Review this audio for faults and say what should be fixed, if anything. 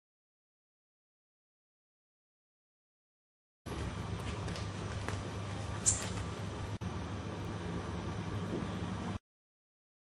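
Bit error spike at 7.45 s: a single sample jumps to about -35 dBFS and returns immediately, giving one sharp, broadband tick that has nothing to do with the surrounding sound. That points to one flipped bit in memory or on a digital link. To prevent it, use error-checked transfers and ECC memory, and repair the sample by interpolation.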